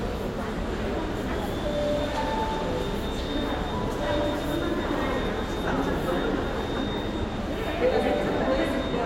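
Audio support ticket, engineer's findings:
Listened across the whole clip and found nothing to flag, so there's no fault on this one and the ticket can be closed.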